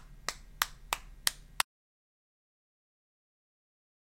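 Audio dropout to silence from 1.62 s to the end: the sound cuts off abruptly into silence with no room tone left, likely from lost input while recording continued writing silence.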